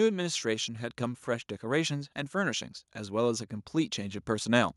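From about 0.42 s right through to 4.72 s you can hear automatic gain rising. The gain control decided the incoming level was too low and kept nudging its gain up, ending roughly 6 dB louder than where it started. Because it's turning up the whole input, not just the talker, the speech and the background noise swell together, a slow, steady climb over four seconds rather than any sudden jump.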